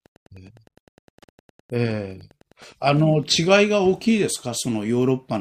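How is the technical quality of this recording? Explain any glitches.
The recording has one clear fault, Wi-Fi interference. From 0 to 3.49 s, a steady ticking sits well below the speech. A nearby Wi-Fi radio's beacon repeats every 102.4 ms. The audio circuit rectifies each pulse. That gives about ten faint ticks per second.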